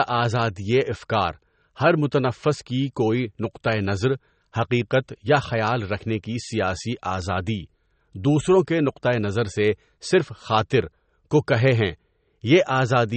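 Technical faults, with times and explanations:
Throughout, MP3 compression: a hard spectrogram ceiling at 8.4 kHz with flickering upper patches makes the speech watery and swirly, likely from a bitrate near 32 kbps.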